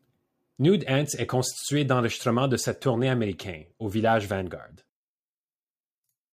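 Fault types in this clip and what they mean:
Sample clock jitter: Throughout the clip a fine hiss and grittiness rides on the speech, growing on louder passages and on bright, sibilant sounds and dropping away in the pauses. This is timing error in the converter's clock. Samples land a little early or late at random, on the order of a couple of microseconds, and the resulting error follows the slope of the waveform, sitting roughly 35 dB below the speech.
One channel inverted: From 4.89 s to the end, the speech suddenly collapses to a faint remnant, about 20 dB quieter. The likely cause is reversed polarity on one stereo channel. When the two channels are combined to mono, everything they share cancels, including the centred speech, and only the small difference between them survives as a faint trace.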